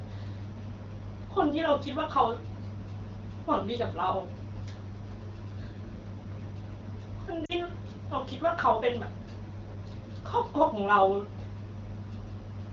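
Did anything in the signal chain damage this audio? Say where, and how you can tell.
Yes. Lost AMR speech frames at 7.45 to 7.52 s, a radio-link fault. Over that span the speech briefly smears and dips down to near silence. The AMR-WB decoder received corrupted frames, discarded them, and filled the gap by repeating the last good pitch and vocal tract settings at falling gain. The 40 ms of concealed audio fits two lost wideband frames, enough for the fade to reach near silence before good frames resume.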